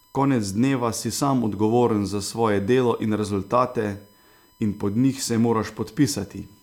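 USB whine runs through the whole recording: current drawn in the bus's 1 ms frames leaks into the audio through power or ground, laying a steady, fixed-pitch tone at 1 kHz under the speech, sitting roughly 35 dB below it.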